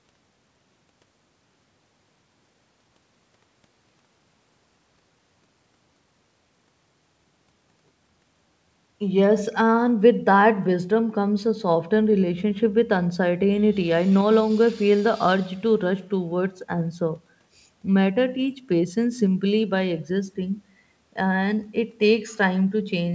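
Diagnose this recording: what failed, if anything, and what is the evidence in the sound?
Nothing failed; this speech passes through without faults.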